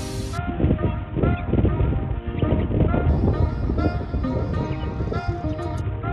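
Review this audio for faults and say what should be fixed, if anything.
A Bluetooth SBC bit pool drop occurs from 0.38 to 3.09 s and again from 5.81 s to the end. The congested link starved the encoder, which fits a bit pool falling from 28 to 5, near 54 kbps. The upper sub-bands lose their bits, so treble dulls and gritty quantisation noise rises. Keeping the Bluetooth link clear of interference and at short range, or using a wired connection, would prevent this.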